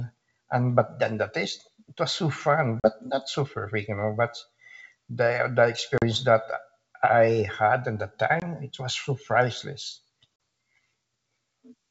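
Speech carried over G.722 wideband coding shows packet loss on an ADPCM call: hard-edged silent holes at 2.80–2.88 s, 5.98–6.05 s (just before "that I had at"), 8.40–8.46 s (between "I had at the" and "it was so priceless"), and 10.36–10.40 s (after "it was so priceless"). Each hole covers one or two packets (about 20 to 40 ms of lost audio). After each gap the decoder's predictor and step size no longer match the sender's, so the speech resumes slightly distorted before settling. That mistracking after the hole distinguishes it from concealed loss, which fills gaps smoothly.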